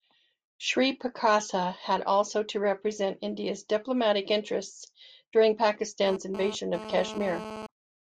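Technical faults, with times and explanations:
6.07–7.67 s: GSM phone buzz. A nearby 2G phone sending data pulses about 217 times a second; the audio circuit rectifies them into a raspy, harmonic-rich buzz about 12 dB below the speech.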